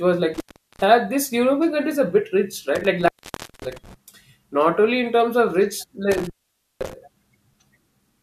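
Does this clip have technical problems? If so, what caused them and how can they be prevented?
Yes, there are two kinds of fault.

Intermittent contact: a loose cable or plug in the signal chain repeatedly broke the connection for about half a second at a time. Each break cuts the speech out, with crackle where the contact opens and closes and faint hiss in the gap. This happens from 0.34 to 0.84 s, just after "was like", open for about 0.39 s; from 2.75 to 3.94 s, ending just before "not only in terms", open for about 0.55 s; and from 6.12 to 6.93 s, open for about 0.51 s. Reseating and securing connectors, and replacing worn cables, prevents this.

Overlap between stream segments: two consecutive segments of the stream carried time stamps that overlapped, so the player discarded the overlapping stretch even though that audio was not actually duplicated. A few milliseconds of sound disappear and the waveform jumps, heard as a tiny skip at 3.54 s, inside the second contact dropout. 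The timing points to segments roughly one second long. Generating segment time stamps from a continuous sample count, so that segment boundaries meet exactly, prevents this.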